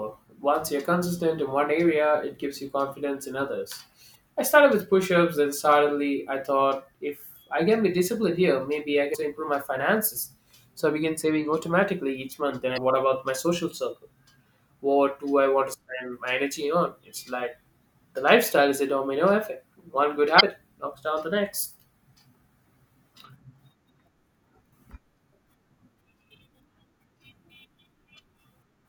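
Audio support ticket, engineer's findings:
Damaged data in a compressed stream: brief glitches at 4.12–4.16 s (before "I started with push"), 9.11–9.15 s, 12.74–12.78 s and 20.36–20.41 s. Decoder loses frame sync and resyncs. Smeared broadband blips on the spectrogram, waveform discontinuities.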